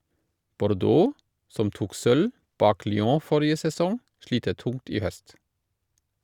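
No technical faults can be heard at any point in the speech, so there are none to describe in time order.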